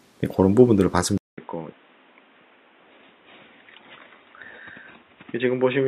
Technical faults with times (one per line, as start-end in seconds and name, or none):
1.18-5.87 input switched to a poorer device